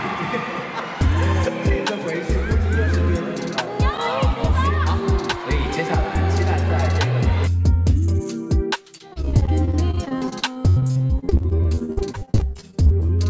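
From 8.98 s to 13.1 s the audio breaks up into repeated packet loss (robotic sound): dozens of short holes, the longest about 68 ms, follow one another in quick succession, each patched by stretching the last sound. Close to a third of that stretch is filled-in material, so it turns choppy with pieces missing. Unlike a single dropout, the gaps recur for four seconds, and the repeated last sound distinguishes concealment from plain silence. The band stops at 8 kHz, consistent with a wideband call codec.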